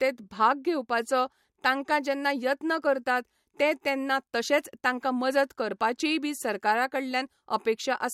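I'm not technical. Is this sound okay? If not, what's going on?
Yes, nothing stood out as a problem when listening to this recording.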